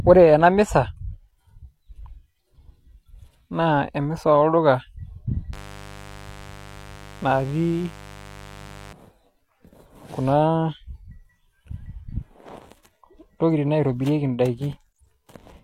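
From 5.53 to 8.92 s a mains buzz sits around 20 dB below the speech: sharp switching spikes, twice per 50 Hz cycle, leak in from a dimmer or poor shielding. Unlike a smooth low hum, its harmonics climb into kilohertz, giving a raspy edge.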